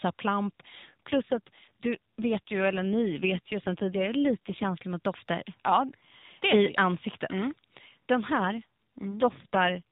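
From 0.82 to 4.80 s, just before "mot dofter", and again from 8.28 to 9.82 s, the speech goes through an AMR rate drop. The codec falls back to a lower mode, with a roughness that points to a change from about 12.2 to 5.9 kbps, spending fewer bits on the voice itself. There is no gap and the narrowband AMR-NB band stays the same, which sets it apart from packet loss or a bandwidth switch. The voice just turns buzzier and more synthetic until the higher rate returns.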